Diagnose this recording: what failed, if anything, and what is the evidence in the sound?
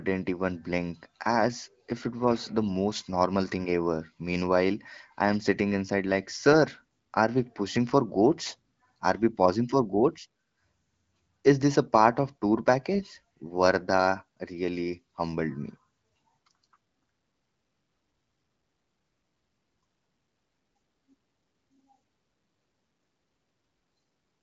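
Nothing in this speech recording points to a failure at any stage of the chain. What can be heard is a working AMR wideband (HD Voice) path: the top end stops near 7.5 kHz, and the light coding texture fits a rate around 15.85 kbit/s, well above the low modes where AMR-WB turns raspy.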